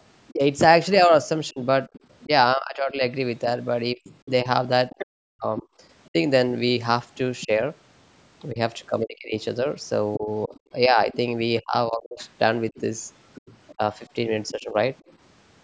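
From 0.31 to 14.75 s, the talker's speech keeps dipping and breaking up. In total about three seconds are affected, with the deepest drops near 35 dB. This is likely speech suppressed in double talk. Both sides seem to be talking at once. The echo canceller cannot tell the talker from the loudspeaker echo, so it turns everything down. The voice fades, thins or cuts out in pieces.

At 1.93 to 2.14 s, a faint second voice appears, about 25 dB below the talker. This is likely the other side's voice leaking through. Playback from the device's loudspeaker was not fully removed from the microphone. From 4.04 to 7.46 s it returns louder, about 15 dB down. From 10.54 to 15.16 s it is back at about 25 dB down. The call's microphone processing leaves nothing above 8 kHz.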